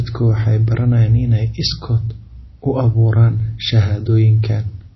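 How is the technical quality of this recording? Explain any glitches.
The technical quality is poor, with data-compression damage throughout the speech. It is likely MP3 compression, and the damage is plainly audible from start to finish. Nothing reaches above 5.8 kHz, so sibilants sound dull and clipped. The encoder ran short of bits, which points to a low rate around 24 kbps. It removed the treble and dropped weaker frequency components that flicker between frames, giving a watery, swirling texture and smeared consonant onsets. On a spectrogram this shows as a hard, flat ceiling at 5.8 kHz with speckled, patchy holes below it.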